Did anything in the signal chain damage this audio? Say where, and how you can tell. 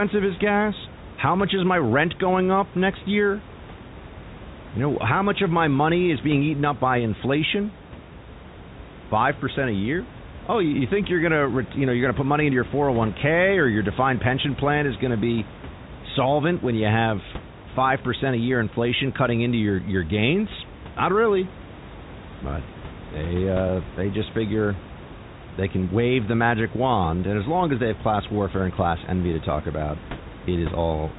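No, nothing in the chain damaged this speech: the room noise sits about 17 dB below the talker, and the top end stops around 3.8 kHz, which is what you'd expect from a 64 kbps G.711 mu-law telephone line doing its normal job.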